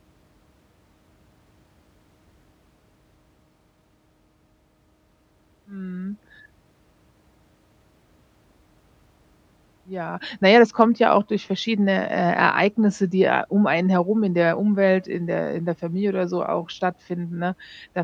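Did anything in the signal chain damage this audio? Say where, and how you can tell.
No, nothing in the signal chain damaged this audio.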